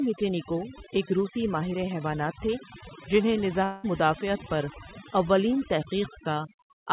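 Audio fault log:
throughout: overdone noise removal. The background drops and breaks up into twinkling specks. An over-strong suppressor is muting individual frequency bands it judges close to noise, taking quieter speech detail with them inside the roughly 4 kHz telephone band.
3.64–3.85 s: long network dropout. After "ماہر حیوانات تھے جنھیں", about 200 ms of speech is missing. The gap is filled with a decaying buzz or hiss rather than silence, and the speech resumes at "مدافعت پر اولین". This is likely a receiver extending the last sound over lost packets.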